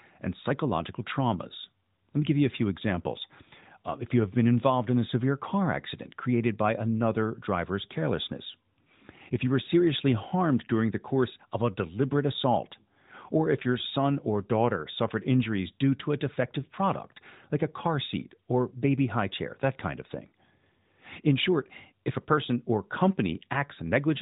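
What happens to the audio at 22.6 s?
Nothing goes wrong at 22.6 s; the speech continues intact there, carried through the narrowband mobile codec with its band limit near 3.8 kHz.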